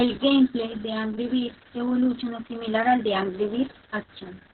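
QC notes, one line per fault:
Throughout, Opus voice compression: the speech is muffled, hoarse and slightly robotic, with nothing above 4.2 kHz. This points to narrowband SILK coding at a very low bitrate, around 6 kbps.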